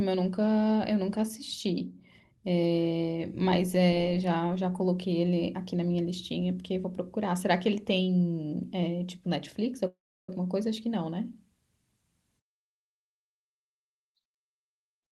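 At 9.87 s the speech breaks off and its last sound is drawn out into a short buzz that fades, then about 320 ms of silence follows before the audio resumes at 10.34 s. This is a call audio freeze, likely caused by packets arriving late so the jitter buffer ran empty. The receiver filled about 410 ms, and the speech picks up where it stopped with nothing lost, now running about 410 ms behind.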